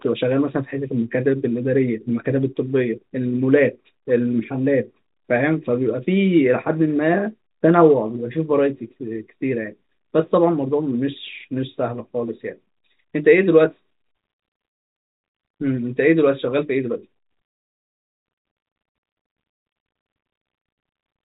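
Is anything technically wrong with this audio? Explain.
No, nothing is technically wrong with this audio.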